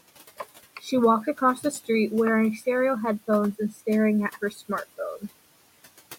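Noise suppressor artifacts run through the whole clip. The suppressor pulls the room noise, which sits about 19 dB below the speech, down by about 16 dB in each band it judges steady. The noise sinks between the words and rises under them.

Speech cut by the noise suppressor occurs at 1.57 to 1.89 s, 3.72 to 3.81 s and 4.51 to 4.62 s. In each, the suppressor mistakes speech for noise and drops it by about 11, 10 and 8 dB, leaving roughly a tenth of a second swallowed or faint.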